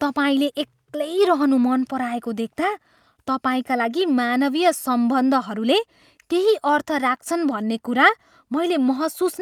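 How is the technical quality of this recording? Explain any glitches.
Nothing in the recording stood out as a technical problem on listening.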